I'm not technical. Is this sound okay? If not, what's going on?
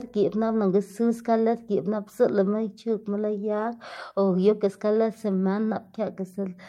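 No. From about 2.93 to 4.57 seconds there is a call bitrate drop: the call judged its connection had less room, so it told the speech encoder to squeeze the sound into far fewer bits. For roughly 1.6 seconds of that stretch it runs at its lowest setting, and the speech comes out rougher, until the connection recovers and the sound returns to its earlier quality.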